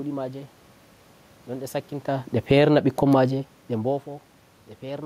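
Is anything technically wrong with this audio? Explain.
Yes, the automatic gain control pumps the level of this speech in quick succession.

Automatic gain falling, 2.36 to 2.72 s: the gain control judged the input too loud and pulled its gain down by about 8 dB over roughly a third of a second. The voice and the room noise behind it sink together, which is the audible mark of a gain change rather than a talker moving.

Automatic gain rising, 2.65 to 3.38 s: the input then dropped by about 17 dB, so the control reversed and raised its gain by about 6 dB over about 0.7 s. Voice and background swell up together. The overlap with the preceding cut makes the level visibly seesaw.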